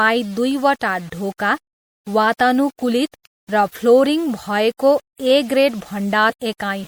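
A short speech recording with a gritty, grainy edge throughout. The distortion tracks the signal, and quiet stretches sputter or break up rather than fading smoothly, with the error sitting only around 30 dB below the speech. That points to low bit depth without dither, likely rounding to something like 7 bits. The whole clip also has a plainly audible watery, swirling quality, with dulled top end and metallic chirps on sibilants. This is likely MP3 compression at a bitrate around 64 kbps, where the encoder drops treble and lets weak frequency components flicker on and off between frames. At 6.29 s the audio jumps forward by about a fifth of a second, with a brief smeared blip at the join rather than a sharp click. This is compressed frames skipped: several 26.1 ms frames were never played, and their overlap with the neighbouring frames blurs the seam.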